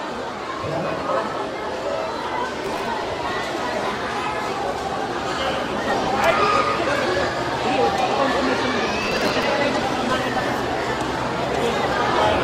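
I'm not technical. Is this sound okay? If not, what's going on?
No, there are two separate problems.

Processor overload crackle, from 2.65 to 2.87 s and again from 9.03 to 9.43 s: the computer falls behind on tiny chunks of audio, around 5 ms each, and replays stale bits instead. That comes out as a short gritty tearing over the sound.

DAB burbling at 3.04 to 3.38 s, 5.75 to 6.32 s, 10.12 to 10.52 s and 11.95 to 12.21 s: weak digital radio reception lets errors slip into the signal, so bits of the sound jump around and give short blips of noise.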